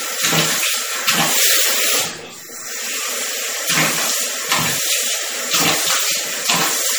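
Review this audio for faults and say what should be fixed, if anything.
Throughout, there's a watery, swirly smear, likely MP3 compression at a low bitrate, maybe around 48 kbps, starving weak frequency lines so they flicker between frames. Keep an uncompressed or high-bitrate master and encode only once, at delivery.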